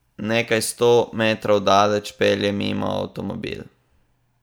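Nothing in the speech signal departs from normal technical behaviour at any point, with no audible disturbance, dropout or distortion anywhere in the recording.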